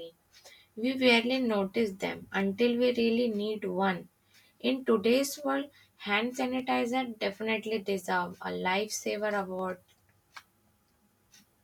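From 0.60 to 11.39 s, clicks recur every 0.6 s as a handful of samples slip, likely clock drift buffer slips; spectrograms show vertical broadband lines.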